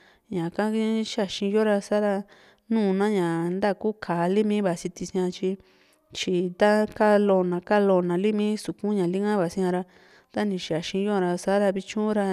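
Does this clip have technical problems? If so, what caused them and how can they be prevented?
No, this clip has no technical problems, so there is nothing to prevent.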